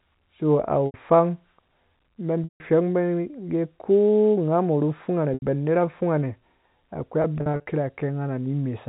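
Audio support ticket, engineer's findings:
Held, buzzy smears, each fading out before the sound resumes, at 0.86–0.94 s (80 ms), 2.44–2.60 s (160 ms, dropping to silence) and 5.34–5.42 s (80 ms). Packet loss with pitch repetition: the receiver loops the last pitch period and fades it over about 50 ms. Lengths fit runs of 20 ms packets. A scattered cluster at 7.22–7.66 s totals 180 ms, longest gap 40 ms. Band-limited G.711 telephone coding.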